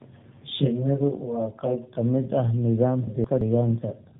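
From the first moment to the end, the speech carries tandem speech coding. The band stops at about 3.8 kHz, and the sound is rough, muffled and slightly warbly, more than a single narrowband coder would leave. That degradation points to two AMR-NB passes with a G.711 stage between them: a low-rate pass around 7.95 kbit/s and a later one around 12.2 kbit/s. Each re-encoding worked on the artefacts of the one before, so the losses stacked.

From 0.00 to 1.98 s, up to just before "mid ah", there is channel delay with comb filtering. One channel runs late by roughly 20 ms. When the two are summed to mono, content common to both cancels at evenly spaced frequencies. The first notch sits at roughly 20 Hz, and further notches repeat about every 50 Hz. The result is a rough, slightly doubled tone over that stretch.

From 3.07 to 3.41 s, just after "mid ah", the chunks are out of order. A block of about 0.17 s arrived one chunk late and plays after the audio that should have followed it. 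No audio is lost, but the sequence is scrambled across three hard joins, so the moment sounds briefly jumbled.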